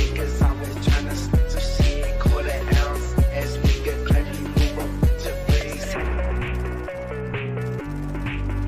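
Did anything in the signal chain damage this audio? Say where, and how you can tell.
No, nothing in the signal chain audibly damaged this audio; level, continuity and timing hold steady throughout, with no sign of trouble at any stage.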